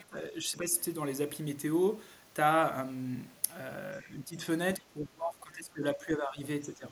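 The speech sinks in four stretches: 0 to 0.74 s, 4.01 to 4.44 s, 4.78 to 6.42 s, and 6.65 s to the end, dropping by roughly 10 to 15 dB. That's likely speech suppressed in double talk, with the echo canceller ducking the talker while the far end speaks.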